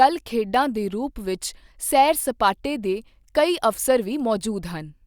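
No technical faults are audible.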